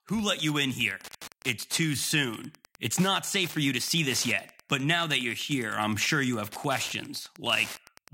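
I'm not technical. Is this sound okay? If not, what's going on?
No. A steady, faint ticking runs under the speech from start to finish, about ten ticks a second. It's Wi-Fi interference: a nearby Wi-Fi radio sends a short signal every 102.4 milliseconds, and the audio equipment picks it up as clicks.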